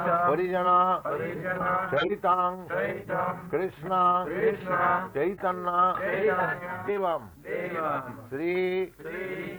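Compressed frames get skipped at 0.64 s and 6.87 s, jumping ahead roughly 40 ms and then 150 ms. In between, a corrupt frame is decoded: at 1.97 s a few damaged frames put a fairly loud burst of energy at the wrong frequencies, and at 5.34 s a single frame does the same, much more faintly.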